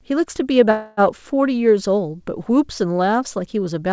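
This speech clip has a call audio freeze from 0.71 to 1.00 s. The sound stops moving forward and the last instant is held as a fading buzz for about 264 ms, with no true silence. Speech then resumes exactly where it broke off, so nothing is lost, but everything after arrives about 264 ms later. The likely cause is packets stalling in transit until the jitter buffer ran dry, with the receiver stretching the last audio to cover the wait. The call path itself cuts off at 8 kHz, which fits G.722 at 64 kbps.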